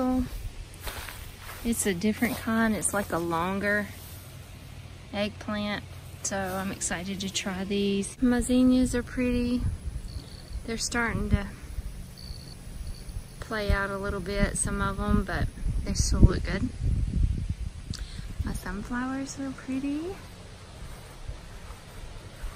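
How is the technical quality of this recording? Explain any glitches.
There is one glitch. From 7.40 to 14.51 s there is video or display buzz. A screen or video cable is leaking into the audio path. It adds a 75 Hz buzz at the picture's field rate, with hash above it, about 25 dB below the sound.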